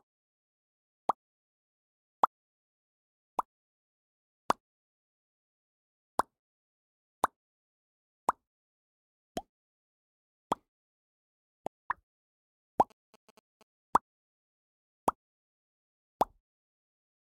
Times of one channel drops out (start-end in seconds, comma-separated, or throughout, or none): none